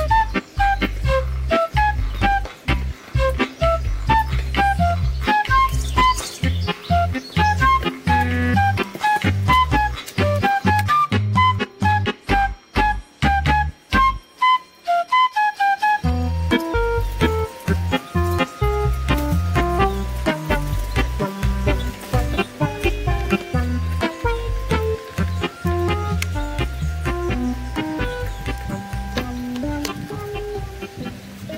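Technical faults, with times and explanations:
No technical faults can be heard anywhere in the audio; the signal stays intact at every point, with nothing interrupting or degrading it.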